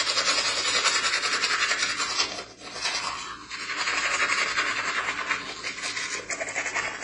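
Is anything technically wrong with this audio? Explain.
Yes, two faults are audible.

AAC compression runs throughout. Nothing is heard above 10 kHz, and the remaining sound is dull and smeared, with a warbling, fizzy texture on sustained sounds. The likely cause is AAC-LC coding at a low rate, which fits roughly 24 kbps. With so few bits, the encoder lowers its cut-off and quantises the remaining frequency lines coarsely against its hearing model, leaving gaps or substitute noise in the upper bands.

Loose connector crackle occurs from 0.40 to 0.44 s as a short, irregular burst of scratchy crackle. A worn or dirty contact briefly makes and breaks the signal path many times in quick succession, chopping the audio into fragments, and any DC present on the line turns each break into a pop.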